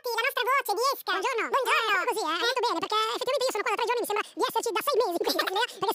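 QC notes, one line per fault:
Throughout, wrong sample rate: everything runs at twice its proper speed and sits a full octave (12 semitones) high, the chipmunk effect. The samples are being clocked out double-fast with no conversion, which fits 24 kHz material played back at 48 kHz.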